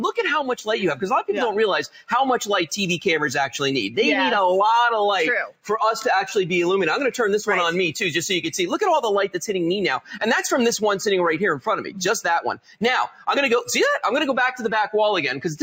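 A noise suppressor built for speech stays active across the whole clip and treats sustained tones, ambience and reverb as noise to be removed. Its gain keeps moving by roughly 5 dB, so sudden onsets pass while held material and decaying tails are pulled down. The result is a pumping and fluttering in level, with the sound thinned and its natural decay shortened throughout.

At four points the suppressor misreads part of the sound as noise and cuts it harder than its surroundings. From 1.88 to 2.11 s the level drops by about 17 dB for roughly a fifth of a second. From 5.47 to 5.70 s the dip reaches about 18 dB. From 12.56 to 12.82 s another cut of about 18 dB lasts close to a third of a second. From 13.07 to 13.28 s a shallower cut of about 11 dB follows. Each sounds like the sustained or fading part of the sound briefly sinking or being choked off, while any sharp attack inside those spans comes through largely intact.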